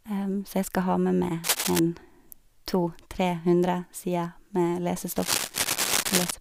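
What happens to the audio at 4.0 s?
Nothing goes wrong at 4.0 s; the speech carries on intact through that moment, with no dropout, click or distortion.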